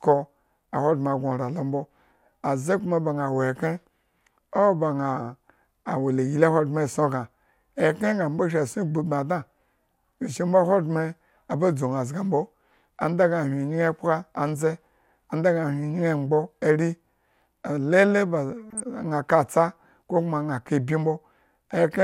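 A speech recording with a short burst of DAB burbling from 18.70 to 18.80 s. Over that tenth of a second the sound is disturbed by burbling. Weak reception has let bit errors through the error correction into the MP2 data, so damaged scale factors and samples throw individual sub-bands up or down in level. A spectrogram shows isolated bright and dark blocks at different frequencies, each about one 24 ms frame wide. That spacing fits roughly half a dozen corrupted frames at a bit error rate of a few tenths of a percent. The waveform shows only a brief ragged disturbance.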